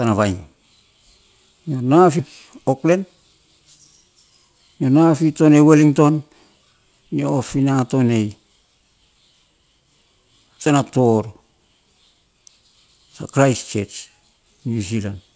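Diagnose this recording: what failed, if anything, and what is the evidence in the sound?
Network and jitter buffer stage: a skip ahead at 2.19 s. About half a second of speech is missing. The two sides are joined directly, with no fill.

Jitter buffer stage: a jitter buffer speed-up from 2.85 to 3.17 s. Pitch periods were cut to shed about 50 ms. The speech runs at 112% speed, hurried but unchanged in pitch.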